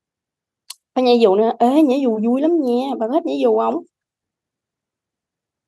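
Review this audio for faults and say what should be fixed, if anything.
There are CD scratch ticks in this speech from 3.72 to 5.15 s: seven short clicks, about four a second, none longer than a few milliseconds. A blemish on the disc is wiping out more data per revolution than error correction can rebuild, so the player patches or mutes those samples. Re-rip from a clean, undamaged disc using a secure ripper that re-reads bad sectors.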